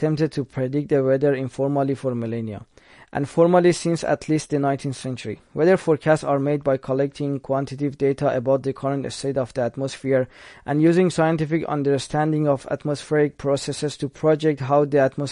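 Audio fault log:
Throughout, MP3 compression. Nothing is heard above 10.6 kHz, so the speech sounds dull and capped in the treble. The damage is plainly audible. The sound has a watery, swirling quality, and s sounds come out chirpy and metallic. The likely cause is an MP3 encoder starved of bits, which fits a low bitrate around 40 kbps. It cut the top band at a fixed frequency and dropped weak spectral lines that flicker between frames.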